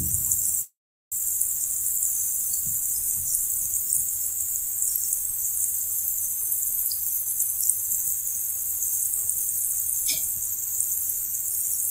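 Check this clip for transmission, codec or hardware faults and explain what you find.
Two transmission faults are audible.

From 0.61 to 1.14 s there is a call audio freeze, likely from delayed packets draining the jitter buffer. The last sound trails off, then about 0.4 s of silence, and playback resumes where it stopped with nothing lost.

From 10.40 to 10.67 s there is a jitter buffer speed-up. An overfull buffer dropped tiny pitch-period slices, about 50 ms in total, so the sound rushes at 115% speed without changing pitch.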